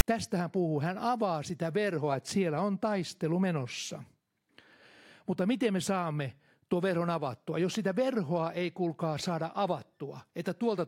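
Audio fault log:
0.0 s: file tags played as audio. Right at the start there's a tiny, hard-edged burst of rasp, offset to one side, then a sliver of dead silence. The tag text is being read as samples, and its zero padding gives the silence.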